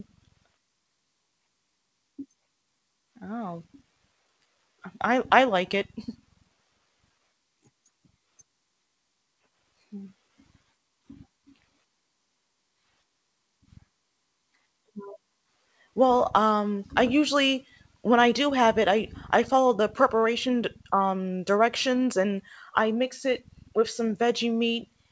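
No faults can be heard in this speech audio, which carries the ordinary sound of a call microphone chain and a wideband call codec, with nothing above about 8 kHz, which fits a G.722-style link.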